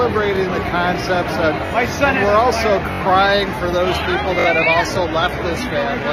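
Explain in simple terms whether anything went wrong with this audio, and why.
Four brief stutters interrupt the sound: at 0.36–0.38 s, 1.66–1.71 s, 2.92–3.01 s and 4.40–4.46 s. Each is a tiny slice of audio, about 21 ms long, played again with a hard join, so it comes out as a quick click or buzz. The slice repeats once at the first spot, twice at the second, four times at the third and three times at the fourth. This is a repeated buffer. The player ran out of fresh audio, so it replayed the last chunk it had. The chunk length fits a 1024-sample buffer.

From 3.77 s to the end, the sound suddenly turns duller, with the crisp top end gone and nothing above about 15 kHz. There is no gap or pause at the switch. This is an adaptive stream at a lower bitrate. When the connection slowed, the stream quietly changed to a smaller, more heavily compressed version to keep playing, and that trades away fine detail and treble.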